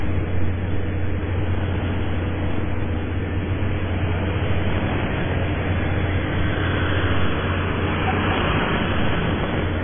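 A recording of everyday sound, it was likely squeezed through heavy MP3 compression at a very low bitrate, around 15 kbps. The encoder discarded everything above 3.5 kHz and starved the remaining frequency lines, so the whole clip sounds dull, watery and swirly, with smeared attacks. From 8.34 to 9.62 s, processor overload crackle sets in. The processor repeatedly missed its deadlines for buffers of a few milliseconds, well over a hundred times, and replayed stale fragments of old audio each time, producing a gritty, tearing crackle that stops when the load passes.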